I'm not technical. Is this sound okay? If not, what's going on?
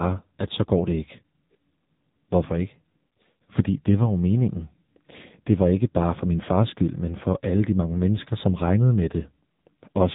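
No. The whole clip carries heavy AMR narrowband mobile codec damage, the squeeze used on older mobile calls. Nothing above 3.8 kHz gets through, so the speech sounds thin and muffled. The codec rebuilds speech from a rough model, which makes it buzzy and synthetic.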